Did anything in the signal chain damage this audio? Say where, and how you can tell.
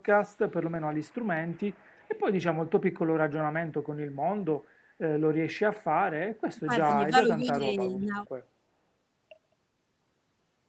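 Yes. Echo leak appears in the call processing stage, at 0.94 to 1.25 s, 1.48 to 2.19 s and briefly at 7.96 to 8.03 s. A faint copy of the speech returns about 0.38 s behind the original, roughly 25 to 35 dB down. The fixed lag and separate copy set it apart from room reverberation, which would smear continuously. The likely cause is a far-end loudspeaker whose echo canceller let part of the pickup through.

Speech suppressed in double talk also sits in the call processing stage, from 6.52 to 6.88 s and from 7.10 to 8.27 s. The speech level dips in patches totalling under a second, by around 25 dB in the first stretch and about 10 dB in the second. The echo leak at 7.96 s shows the other side was active then. The likely cause is an echo canceller that could not separate talker from echo and ducked both. Packet loss would instead leave concealment artefacts, not gain dips.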